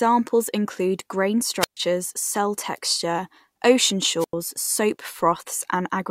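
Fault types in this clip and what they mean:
Wireless microphone squelch dropout: the FM radio link fades until the receiver's squelch mutes the output. Here the speech cuts to near silence twice, for about 129 ms from 1.6 s and about 93 ms from 4.19 s, with a brief rise of hiss around each gap.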